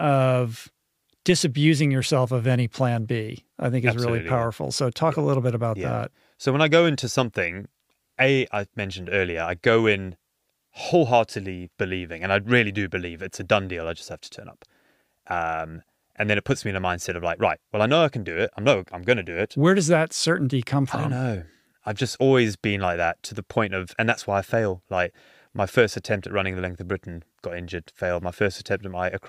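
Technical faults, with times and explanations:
Nothing stood out as a technical fault on listening.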